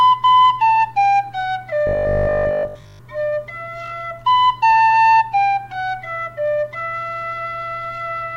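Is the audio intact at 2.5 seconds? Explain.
No. At 2.5 seconds the audio sits inside a stretch of robotic sound from 1.87 to 3.01 s. It turns into a rigid, metallic buzz at 50 Hz that only loosely tracks the underlying sound. The likely cause is repeated short buffers: when fresh audio arrives too seldom, the last block of about 20 ms is replayed to fill the gap while real material is skipped. Roughly 70 percent of that stretch is repeated rather than new.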